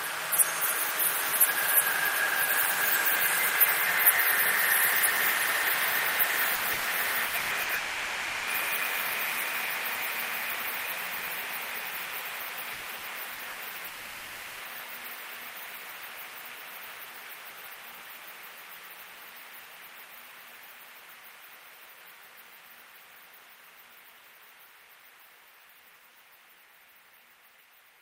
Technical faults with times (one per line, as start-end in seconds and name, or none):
6.55-6.88 burst of packet loss
7.27-7.72 burst of packet loss
7.75-8.50 long network dropout
12.73-13.60 repeated packet loss (robotic sound)
13.87-14.62 long network dropout